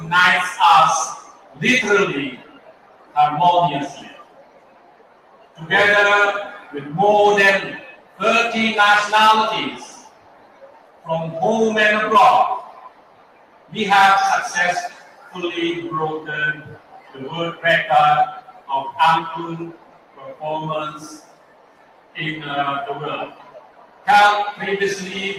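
A noise suppressor built for speech was left active for the whole clip, so it treats sustained tones, ambience and reverberant tails as noise and keeps pulling them down. This is a noise suppressor applied to music or sounds, and its gain swings by around 20 dB as it decides what to keep. Onsets get through largely intact, but anything held or decaying sinks behind them. The level pumps and flutters, and the sound thins out wherever it sustains.

The sound cut by the noise suppressor is clearest in eight stretches: 1.15 to 6.74 s, 7.79 to 8.21 s, 9.76 to 11.09 s, 12.59 to 13.72 s, 14.89 to 15.36 s, 16.54 to 18.7 s, 19.71 to 22.17 s, and 23.27 to 24.6 s. In each, the suppressor takes steady or fading material for noise and drops it by about 13 to 15 dB at its deepest. Tails are chopped short and held parts sag, while sudden transients mostly come through.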